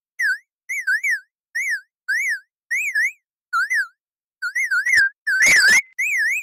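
Repeated packet loss (robotic sound) runs from 4.87 to 6.00 s: data keeps going missing in short bursts, about eight holes, the longest 75 ms. Each is patched by stretching the preceding sound, so the audio turns choppy, with fragments dropping out.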